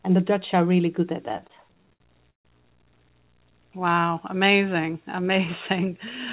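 Speech, heard through a narrowband call path whose spectrogram stops at 4 kHz, which fits G.711 A-law at 64 kbps. From 1.26 to 2.47 s there are repeated stalls (stutter): packets arrived late, the jitter buffer kept running empty, and over a dozen gaps were bridged by continuing the last sound, the longest about 146 ms. Those fills take up roughly 29% of the span. The waveform shows short repeated stretches, some fading in level, and on the spectrogram the frequency bands hold flat and smeared where the speech should move on. From 3.79 to 4.38 s a jitter buffer slow-down repeats single pitch periods to rebuild its reserve, adding 69 ms and slowing the speech to 90% speed at unchanged pitch. On the spectrogram the harmonic spacing stays the same while syllables stretch sideways, and the waveform shows runs of near-identical cycles.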